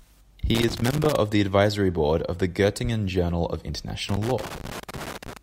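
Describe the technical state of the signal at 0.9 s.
At 0.9 s a worn or dirty contact somewhere in the signal chain is intermittently making and breaking, so the speech is caught in a loose connector crackle lasting from about 0.55 s to 1.16 s. Each break chops the signal, and any DC on the line turns those interruptions into pops. The result is an irregular burst of scratchy crackle over the audio, which clears just before "the advisory board of".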